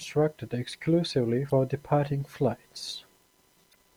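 Speech with a grainy, signal-following distortion throughout, sitting roughly 40 dB below the level, which is likely low bit depth without dither, consistent with undithered rounding to about 9 bits. Short glitches at 1.48–1.51 s and 3.71–3.75 s indicate damaged data in a compressed stream, where the decoder misreads corrupted frames and briefly loses sync.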